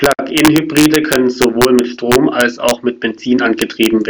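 Integer overflow runs through the whole speech clip. The signal was driven about 3 dB past full scale, and instead of being limited, each sample beyond the largest integer value wrapped around to the opposite extreme. Only a tiny fraction of samples cross that line, so the damage lands on the loudest peaks as sudden, violent cracks. Unlike clipping, which flattens peaks into a buzzy rasp, these full-range sign flips snap far more sharply and harshly.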